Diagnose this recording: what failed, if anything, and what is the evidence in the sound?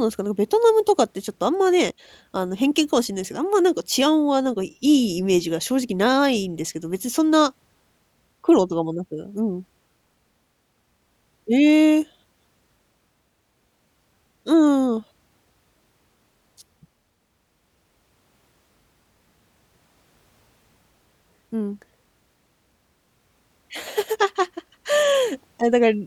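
Nothing failed in this speech recording; no stage of the chain shows a fault. No dropout, glitch or distortion appears anywhere in the sound, so there is no evidence pointing to any stage.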